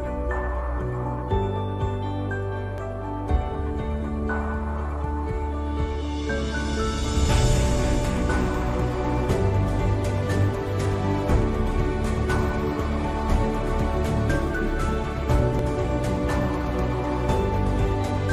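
The recording path likely failed to read its capture buffer before the hardware reused it, a dropped buffer (overrun), so a short stretch of samples was lost and the sound on either side was joined directly. At 2.78 s roughly 20 ms goes missing, heard as a small jump forward with no gap of silence. At 15.59 s a smaller loss of a few milliseconds produces a shorter skip.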